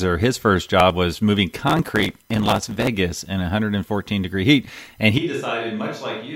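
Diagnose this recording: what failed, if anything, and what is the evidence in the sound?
The audio driver or buffer stage fell behind. From 1.68 to 2.88 s, just after "first job was moving", the processor missed buffer deadlines repeatedly, skipping very short buffers of under a millisecond, roughly two hundred of them. Each skip leaves a hard-edged gap, so the speech carries a gritty crackle until the load eases.

At the capture stage, the close microphone's signal was likely lost at 5.18 s, right after "degree heat and", leaving a distant microphone to carry the speech to the end. The voice abruptly turns roomy and thin, drops about 10 dB, and sits over room noise about 35 dB below it.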